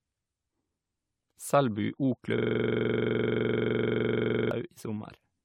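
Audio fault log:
throughout, generation loss: the speech sounds swirly, smeared and hollow, with blurred attacks and nothing above 18.6 kHz. This is likely from about four successive lossy passes, consistent with AAC-LC near 96 kbit/s. Each pass requantises on a shifted frame grid, so the noise and spectral holes accumulate.
2.38–4.51 s, system hang loop: a 42.67 ms slice repeats exactly about fifty times, giving a rough, rapid buzz at 23.4 Hz in place of the speech. The playback hardware kept cycling a stalled ring buffer, which fits a 2048-sample buffer.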